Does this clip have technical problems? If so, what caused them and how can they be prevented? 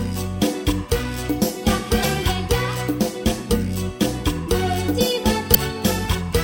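Yes. There is damaged data in a compressed stream at two points. The first runs from 2.01 to 2.05 s, the second from 5.51 to 5.56 s. Each lasts about 40 to 50 ms and is heard as a short, harsh blip. Corrupted bytes in the encoded frames there made the decoder misread them and lose sync until it found a valid frame header. To prevent it, transfer and store files with checksums or error-protected containers.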